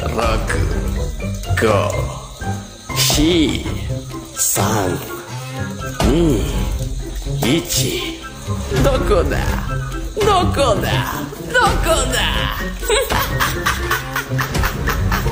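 No technical faults are audible anywhere in the audio.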